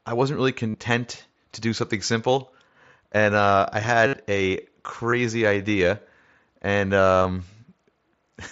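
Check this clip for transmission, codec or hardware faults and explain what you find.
There is concealed Bluetooth headset packet loss, carried over the mSBC headset codec. It occurs after "I wasn't really" at 0.70–0.74 s, after "simple and uh I" at 4.07–4.13 s, at 5.11 s, and across 7.15–7.25 s. Voice packets from the headset were lost. The receiver filled each gap by repeating the closest-matching recent stretch of waveform. The longer gaps, up to 60 ms, become a buzzy held tone with a slight warble as real audio resumes.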